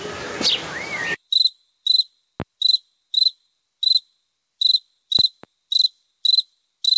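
Everyday sounds here, passed through a G.722 call path, which is why nothing reaches above 8 kHz. Throughout the clip there's gain pumping: the gain swings by roughly 5 dB, ducking whenever something loud arrives, so the dynamics feel squashed. The likely cause is input gain set far too high, with a fast limiter or compressor clamping down on every peak. There are also loud pops, one sharp hit at 2.40–2.43 s and a quick pair between 5.19 and 5.47 s, each jumping around 10 dB above the surrounding sound, which carries on underneath them. They're most likely voltage spikes from a connector, switch, static discharge or a driver hiccup, shaped by the circuitry that follows.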